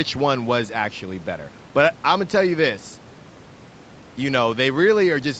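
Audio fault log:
Speech band-limited at 8 kHz by the call codec and microphone path, with room noise sitting about 25 dB below the speech level, and no faults present.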